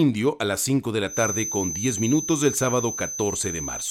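From 1.05 s to the end, a feedback whistle sits at 6.2 kHz, roughly 10 dB below the speech. Likely a speaker-to-microphone loop held just short of runaway.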